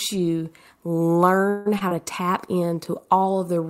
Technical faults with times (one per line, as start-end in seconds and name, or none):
1.49-1.75 call audio freeze
1.79-1.93 short concealed packet loss
1.98-3.69 call bitrate drop